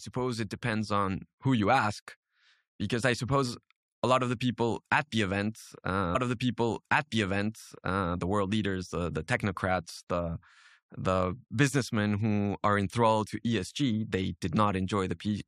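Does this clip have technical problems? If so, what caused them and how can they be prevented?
Yes. At 6.14 s there's a stream segment repeated: the player jumps back with a small blip and replays about 2.0 s of speech, through 8.14 s, because the same segment got fetched or queued twice. Tracking segment sequence numbers and dropping duplicates in the player would prevent it.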